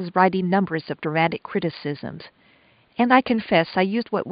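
Nothing technical goes wrong anywhere in this stretch of speech, so there's no fault here to time or trace to a cause.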